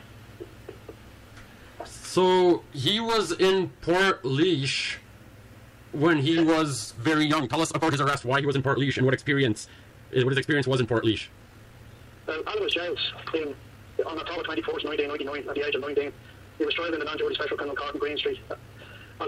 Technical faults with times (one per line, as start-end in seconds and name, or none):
7.01-19.27 time-stretched section